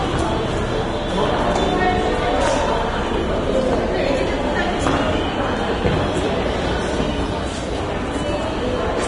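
From start to finish the sound is grainy and hissy, with a fizzy texture sitting over the upper range, tones that come across roughened rather than clean, and attacks smeared instead of crisp. Nothing reaches above 10.6 kHz, so the top end is shut off. This is heavy damage that likely comes from Vorbis compression at a low setting, consistent with roughly 31 kbps, where treble detail is quantised so coarsely it turns into noise-like grit.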